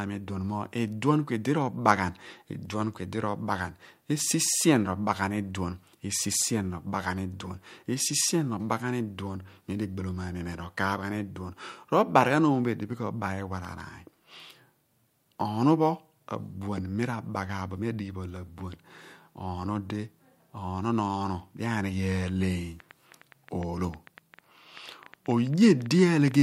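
Interference from nearby equipment or a faulty connection or power supply is the likely cause of a train of clicks in this speech recording, running from 22.12 s, just after "di anighe", to 26.36 s: some forty similar pulses at about 8 per second, unevenly spaced and as loud as the speech, ticking over it and through its pauses.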